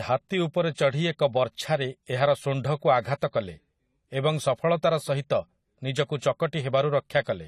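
The whole clip has a clearly audible band-limited, smeared quality, with nothing above 14 kHz. That is likely AAC compression, AAC-LC at a low rate fitting around 32 kbps, trimming the top end and coarsely quantising what's left, so sibilants come out dull and fizzy. Right after "ବର୍ଚ୍ଛାରେ ଏହାର ଶୁଣ୍ଢକୁ", from 3.01 to 3.05 s, there's pre-echo: a short hiss spreading about 34 ms ahead of a sharp attack. The codec smeared the quantisation noise meant for the loud onset back into the quiet gap before it, so the attack sounds softened.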